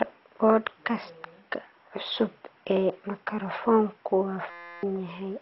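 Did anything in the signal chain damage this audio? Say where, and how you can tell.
Yes. At the codec stage, the whole clip sounds dull and gurgly, with nothing above 5.6 kHz, most likely MP2 compression at a low rate, which fits about 32 kbps.

Then at the driver or buffer stage, from 4.50 to 4.83 s, there's a system hang loop: a 5.8 ms chunk repeats as a 172 Hz buzz, which fits a 256-sample buffer.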